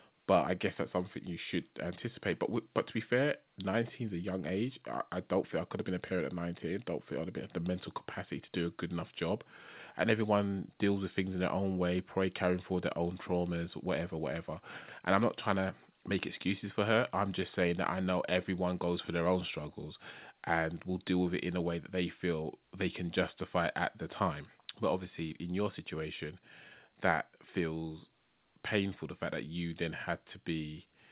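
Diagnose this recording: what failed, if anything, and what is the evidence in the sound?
Nothing in this recording points to a failure at any stage: the speech has the steady, narrowband character of a telephone-grade call path, with no content above 4 kHz, which fits G.711 A-law coding at 64 kbps.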